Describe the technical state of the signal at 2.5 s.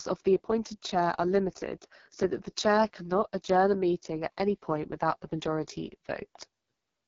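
At 2.5 s, as throughout, the speech passes through an AMR wideband (HD Voice) codec at what sounds like its lowest rate, around 6.6 kbit/s, leaving it rough, raspy and empty above 7.2 kHz.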